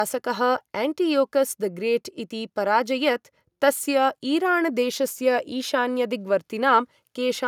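No technical faults can be heard anywhere in the speech. There is nothing in the audio that calls for comment on that front.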